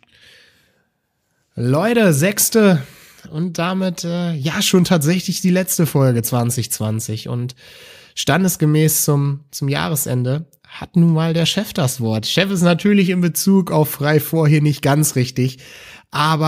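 No technical faults can be heard anywhere in the recording; the signal stays steady and intact throughout.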